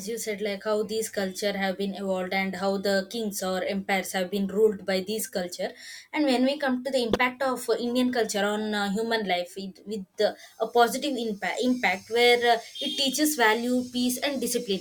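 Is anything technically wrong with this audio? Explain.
Yes. Corrupt frames were decoded three times: at 5.19 to 5.24 s after "have been ruled by", at 7.12 to 7.19 s after "we come to the", and at 9.24 s after "culture on uh". Damaged bits in a few frames were decoded anyway, so misread gains and codes put energy at the wrong frequencies, heard as a brief chirpy burst. The loudest reaches about -5 dBFS at 7.1 s, and the 9.24 s one is faint.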